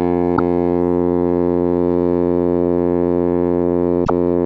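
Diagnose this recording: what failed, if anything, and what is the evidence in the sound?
Codec: music glitches and skips ahead at 0.35–0.39 s and 4.04–4.10 s, vertical spectrogram smears; likely a broken MP3 bit reservoir after dropped 26 ms frames.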